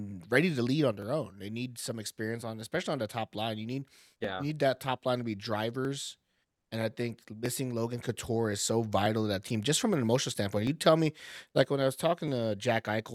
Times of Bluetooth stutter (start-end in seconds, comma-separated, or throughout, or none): none